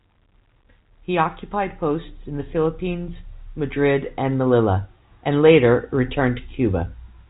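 The speech arrives through G.711 telephone coding working as intended, with its content stopping around 3.8 kHz and its faint level-following quantisation hiss sitting well below the voice.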